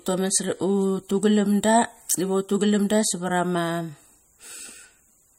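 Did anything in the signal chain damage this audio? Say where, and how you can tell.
Yes, at the codec stage. Throughout, the speech sounds watery, with nothing above 15.9 kHz. This is likely MP3 compression, pointing to a low bitrate near 46 kbps.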